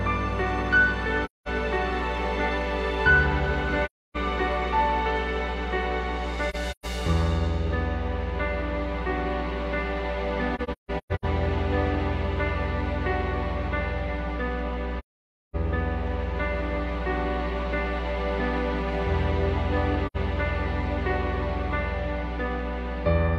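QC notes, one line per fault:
Throughout, mains hum: a steady 60 Hz tone, only about 5 dB below the programme, from power-line coupling such as a ground loop or nearby transformer. Because it is so close in level to the wanted sound, the low drone is clearly audible under everything, even in quiet passages. A spectrogram shows an unbroken horizontal line at 60 Hz across the whole clip, with fainter harmonic lines above it. The waveform carries a constant low-frequency ripple.
1.25–1.48 s, 3.85–4.17 s, 6.49–6.85 s, 10.55–11.25 s, 14.99–15.56 s and 20.06–20.16 s, AAC frame loss with muting: the decoder zeroed the missing frames, and the overlapping windows fade the sound out and back in, leaving soft-edged holes. The gaps run from roughly 85 to 550 ms, which fits whole frames of about 43 ms. The 6.49 s and 10.55 s spans break into shorter holes, the longest around 150 ms. On a spectrogram each hole is a vertical blank band with tapered edges, and the waveform shows a smooth fade to silence.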